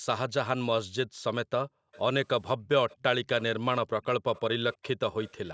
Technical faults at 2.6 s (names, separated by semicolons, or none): background gated by the echo canceller; echo leak